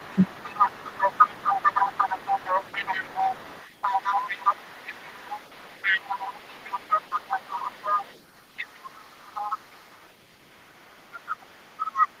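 At the very start, from 0.0 to 0.24 s, an echo canceller likely mistook simultaneous talk from both ends for loudspeaker echo and turned the whole signal down. The result is speech suppressed in double talk: the talker's level sinks by roughly 15 dB at its deepest, over about 150 ms in total, so the opening sounds ducked and partly swallowed before it recovers.

Running alongside, from 0.0 to 8.2 s, the echo canceller likely failed to clear the far-end loudspeaker signal from the microphone, leaving the other side's voice leaking through about 10 dB below the talker. It sits in the background as a second voice. The leak drops briefly, then returns from 8.36 to 10.1 s and again from 10.52 s to the end, now fainter at roughly 20 dB below the speech.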